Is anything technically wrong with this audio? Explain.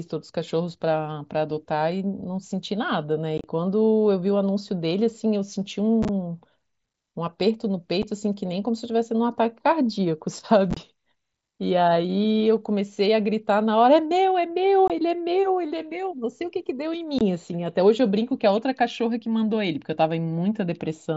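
Yes: unconcealed Bluetooth headset packet loss at 3.38–3.44, 6.03–6.09, 8.02, 10.71–10.77, 14.88–14.90 and 17.19–17.21 s. Short radio packets between headset and phone went missing with nothing to fill them. The first, second and fourth events are bursts of losses scattered across about 60 ms, consistent with 7.5 ms packets. The result is abrupt silent holes of roughly 8 to 30 ms that chop the speech, over an mSBC wideband link.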